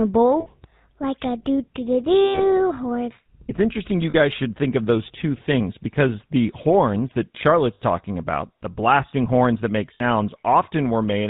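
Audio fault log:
Throughout, GSM full-rate codec: the speech has that buzzy, gravelly roughness of the old vocal-tract model driven by a sparse pulse excitation, and there's nothing above 4 kHz. The damage is plainly audible, consistent with a 13 kbps GSM full-rate link.
0.40–0.47 s, 2.25–2.45 s, 4.10–4.15 s, 7.74–7.81 s and 9.94–10.01 s, lost GSM frames: gaps of 60, 100, 40, 60 and 60 ms get papered over by repeating the last good frame, so you hear a short rough, metallic ring. The longest one points to about five frames gone.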